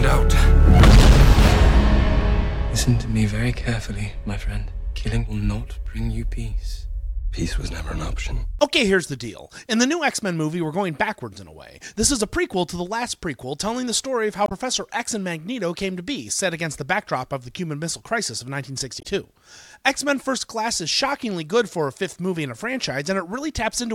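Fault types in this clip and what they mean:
Damaged data in a compressed stream: corrupted bytes in the encoded file make the decoder misread frames and lose sync until it finds the next frame header. Here it occurs twice, about 80 ms at 14.44 s and 60 ms at 18.99 s.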